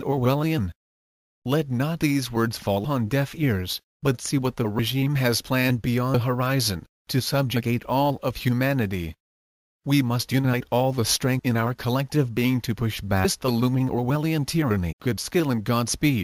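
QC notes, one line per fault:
2.84–2.86, 6.13, 11.38–11.40: compressed frames skipped. The audio jumps ahead by roughly 150 ms with a brief glitch at each join, consistent with about seven missing or rejected frames of around 23.2 ms.
13.24: compressed frames skipped. A larger jump of about half a second with a glitch at the join, as roughly twenty frames are never played.
14.91–14.93: compressed frames skipped. The audio jumps forward by about 0.7 s, the longest gap, which points to around thirty frames lost or refused as damaged.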